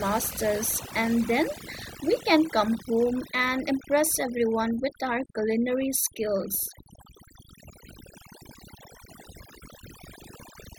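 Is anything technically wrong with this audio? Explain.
Yes. Throughout, the speech sits over a near-silent, twinkling background, the mark of overdone noise removal: aggressive reduction cuts bands near the noise estimate, taking quiet speech detail too.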